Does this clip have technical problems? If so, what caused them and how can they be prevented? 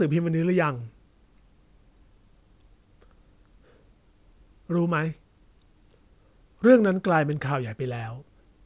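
No, no technical faults here.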